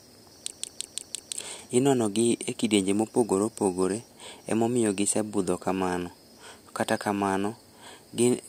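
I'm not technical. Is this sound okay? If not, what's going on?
No. From 0.51 to 1.37 s the speech stutters like a machine gun: one fragment of about 0.17 s repeats five times, roughly six times a second. This is a system hang loop: the computer briefly froze while its sound hardware kept replaying the same short stretch of audio.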